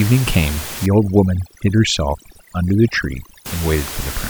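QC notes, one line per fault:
0.86 to 3.46 s, overdone noise removal: the room noise, sitting about 12 dB below the speech, drops and breaks up into twinkling specks, and quiet parts of the speech vanish alongside it. A spectrogram shows a dark, speckled background and patchy, hollowed-out harmonics.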